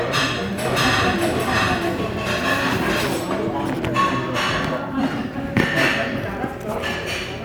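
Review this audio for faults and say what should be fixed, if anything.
From 0.65 to 3.07 s there's a doubled audio track: a second, full-band copy of the sound trails the original by roughly 0.7 s at about the same level, then cuts in and out abruptly with no decay or room colour around it. That points to the same signal being mixed in twice, likely from a slower second capture path or an edit leaving two out-of-step copies overlapping. Worth removing the duplicate there. To prevent it, make sure each source reaches the mix through one route only and check edits for stacked copies before export.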